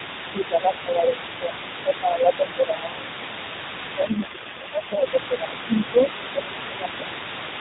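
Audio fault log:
Throughout, other side's voice leaking through. A second voice sits under the main talker for the whole clip, at about 15 dB below it. This is likely loudspeaker echo that the echo canceller did not fully remove from the microphone. The leftover is quieter because the canceller took out part of it but not all.
0.00 to 1.63 s, 1.84 to 3.30 s and 3.84 to 7.08 s, speech suppressed in double talk. In each of these stretches the main talker dips in level while the leaking voice is also present. The drop is about 10 dB at its deepest. The talker sounds pushed back and uneven. The likely cause is that the echo canceller could not tell the talker apart from the echo and turned both down together.
4.08 to 5.12 s, AMR rate drop. The talker turns rougher, buzzier and more synthetic for about a second. There is no gap and no change in bandwidth. The AMR-NB codec steps down from 12.2 to 4.75 kbps, so far fewer bits describe each 20 ms frame. 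Outside this stretch the codec runs at 12.2 kbps, where its damage is light. Then the sound clears again as the higher rate returns.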